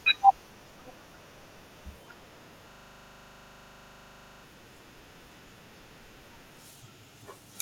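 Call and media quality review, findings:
Speech replaced by a repeating loop at 25 Hz, 2.71 to 4.43 s. One 40 ms slice repeats identically, 43 times. System hang loop: host or audio driver stalled while the playback hardware kept re-reading the same ring buffer.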